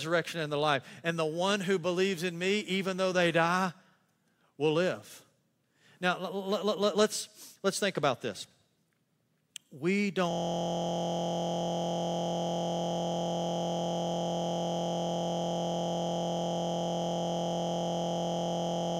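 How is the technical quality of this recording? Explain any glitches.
The recording breaks down partway through with a system hang loop. From 10.31 s to the end, a single 23.22 ms slice repeats hundreds of times, which fits a 1024-sample buffer cycling while the system stalled. It sounds like a steady 43.1 Hz buzz. A waveform shows identical repeating blocks, and a spectrogram shows evenly spaced harmonic lines.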